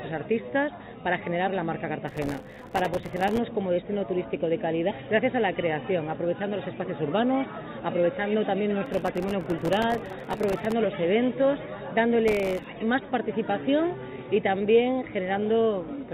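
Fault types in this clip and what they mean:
Clock drift between sender and receiver: The sender's audio clock runs slow by roughly one and a half percent, so the receiver's jitter buffer keeps draining. Small, unevenly spaced timing hiccups run from start to finish, heard through a call path that carries nothing above 4 kHz.
Repeated timing corrections: To stay in step with the slow sender, the receiver keeps repeating short pieces from 0.42 s to 15.98 s. It plays at 99% speed and adds around a fifth of a second overall.
Processor overload crackle: The processor missed long runs of its very short buffer deadlines, and each miss left a tiny hard-edged gap of silence. Together these gaps make gritty tearing crackle at 2.08 to 3.38 s, 8.86 to 10.72 s and 12.28 to 12.66 s.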